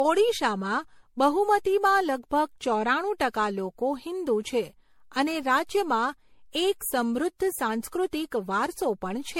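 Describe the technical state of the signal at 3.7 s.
At 3.7 s you're hearing generation loss, and it runs through the whole clip. The speech sounds swirly and hollow, attacks are smeared, and nothing sits above 16.6 kHz. That points to repeated MP3 passes, likely around seven at roughly 64 kbit/s, each re-quantising on a shifted frame grid.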